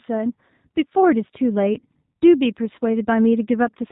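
Speech passed through a G.729 codec, whose low-rate pulse-and-filter coding cuts everything above 4 kHz and leaves the voice plainly rough and synthetic, consistent with an 8 kbit/s stream. At 1.80 to 1.84 s, VoIP packet loss concealed by the speech codec drops about 20 ms of audio. The decoder extrapolates from the preceding sound, producing a brief, fading smear of buzzy tone or coloured noise.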